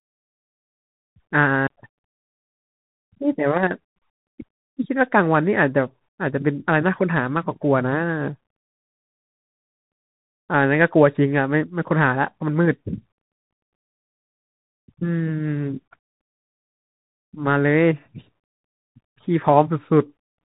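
From start to finish, the speech carries the sound of a Bluetooth CVSD headset codec. The band stops at about 3.8 kHz, so the speech sounds boxed in and dull. The codec sends one bit per sample, saying only whether the signal rises or falls, with a step size that adapts. That fits a 64 kbps link. Fast, loud changes outrun the step. Sibilants turn rough and scratchy, and a grainy hiss sits beneath the speech.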